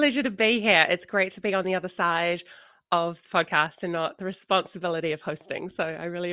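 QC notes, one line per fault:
Nothing to flag here; the speech runs along without a single technical problem showing up anywhere.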